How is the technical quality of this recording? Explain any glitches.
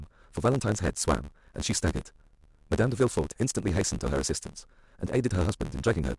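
The recording has one fault that runs through the whole clip: a block size mismatch (truncated). One stage of the chain writes audio in longer blocks than the next stage reads, so the tail of every block is discarded. Those regular cuts add a buzz at 75 Hz, which fits 512-sample blocks being written, and because part of each block never arrives, the speech plays back 1.6 times faster than normal while keeping its natural timbre.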